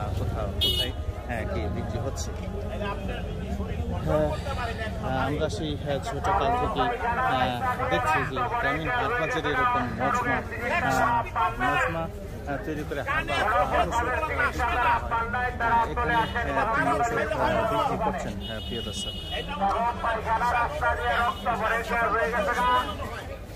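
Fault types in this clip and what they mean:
Nothing here stands out as a technical fault; no dropouts, glitches or other problems catch the ear anywhere in the audio.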